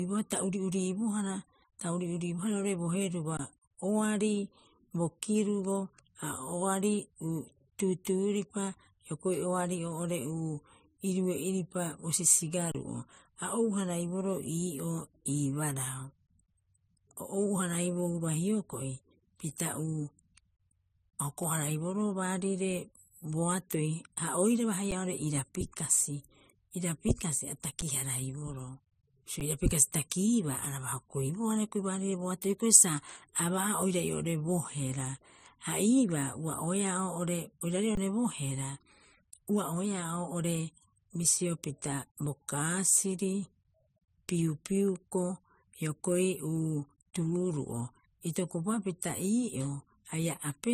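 Transcoding between lossy codecs runs through the whole speech recording. Nothing is present above 15.2 kHz, and smeared, swirly high-frequency artefacts sit alongside a second, different coding texture. This is likely a low-rate MP3 pass, around 39 kbit/s, re-encoded to AAC-LC near 64 kbit/s. The later encoder spends its bits reproducing the earlier damage while adding its own.

Underruns with a held sample occur at 3.37–3.39 s (21 ms), 12.72–12.75 s (29 ms), 24.91 s, 27.81 s, 29.40 s (each about 8–11 ms) and 37.95–37.97 s (21 ms). At each one the output buffer ran dry, and the converter froze on its last value, so the waveform flattens and the sound briefly stops. Roughly as much live audio as the gap length went missing. Four of the gaps are 512 or 1024 samples long.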